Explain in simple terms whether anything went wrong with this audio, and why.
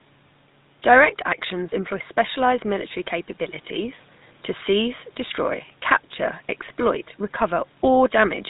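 The speech passed through the GSM full-rate codec, the old mobile-phone system, for the whole clip. It rebuilds the voice from a rough model driven by regular pulses and drops everything above 4 kHz, so the voice sounds muffled, buzzy and gravelly throughout. The faint room noise behind the speech belongs to the recording itself.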